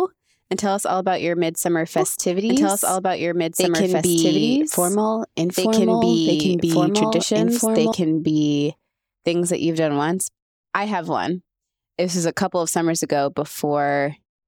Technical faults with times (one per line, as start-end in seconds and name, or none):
1.98-7.92 doubled audio track